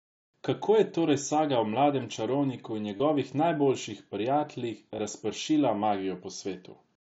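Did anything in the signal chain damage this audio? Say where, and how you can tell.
Yes, concealed Bluetooth headset packet loss on the wireless link: about 30 ms after "o mladem čarovniku in" (2.97 s) and 22 ms after "najboljših prijateljih" (4.96 s), each gap filled by a repeated, buzzy waveform segment.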